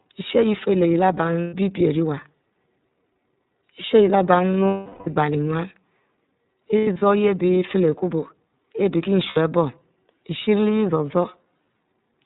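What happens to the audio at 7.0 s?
Packets carrying iLBC frames went missing between 6.78 and 7.02 s, about 150 ms of speech in all, which fits five 30 ms frames lost. The decoder filled each gap by repeating the last pitch cycle blended with noise. The worst stretch runs about a tenth of a second and sounds like a briefly held, buzzy, breathy vowel. The voice recovers almost immediately afterwards.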